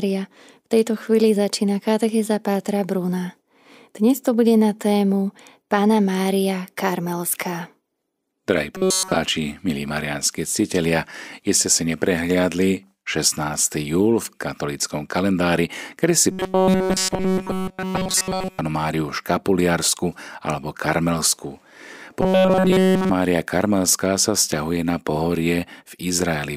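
The speech most likely received fresh audio too seldom and kept replaying a fragment of about 5.3 ms, producing robotic sound from repeated short buffers from 8.75 to 9.16 s, 16.32 to 18.59 s and 22.21 to 23.10 s. In each stretch essentially all of the audio is repeated material, so a fixed buzz at 188 Hz is imposed and the voice turns flat and metallic, still loosely following the words.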